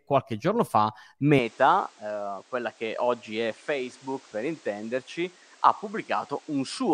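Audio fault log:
1.39–6.94 s, input switched to a poorer device: after "qualche giorno fa" the speech turns duller, with nothing above 9.4 kHz and new noise about 30 dB down, but no gap or level jump. The likely cause is a change of microphone. A spectrogram shows a flat ceiling at 9.4 kHz over faint haze.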